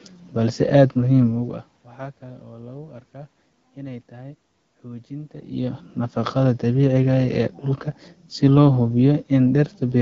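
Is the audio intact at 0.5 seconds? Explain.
Yes, the audio is intact at 0.5 seconds, with no fault at that moment.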